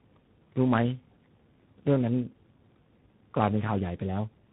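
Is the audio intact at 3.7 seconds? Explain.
No. Tandem speech coding runs through the whole clip, including 3.7 s. The speech sounds like it went through about three speech codecs in a row, each re-coding the last one's damaged output. It sounds rough, muffled and warbly, with nothing above 3.8 kHz.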